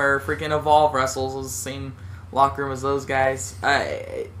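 No technical faults can be heard anywhere in the audio. The sound runs without interruption from its opening moment to its close.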